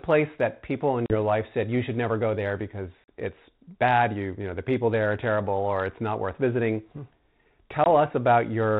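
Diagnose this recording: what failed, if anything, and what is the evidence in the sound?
Network packet loss on an ADPCM call: hard silent gaps at 1.06, 3.04 and 7.84 s; unlike clean dropouts, each ends in slightly distorted speech as the decoder resyncs.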